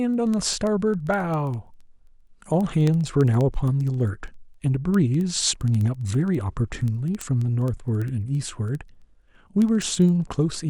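A digital link is being read by a receiver running on its own clock rather than locked to the sender's, and the mismatch, around 300 ppm, points to a single sample being dropped or repeated at each slip. From 0.14 s to 10.69 s this produces word clock ticks: sharp, uneven clicks recurring about every 70 ms, some 150 in all, recurring steadily through the speech.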